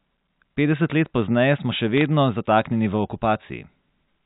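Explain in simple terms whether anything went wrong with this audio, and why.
Bit errors on a digital phone line, from 1.97 to 2.06 s, right after "let pozneje smo še": a small fraction of flipped bits corrupts single samples, producing brief ticking crackle over the speech.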